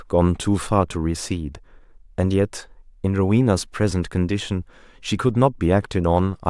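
A speech recording with nothing technically wrong with it.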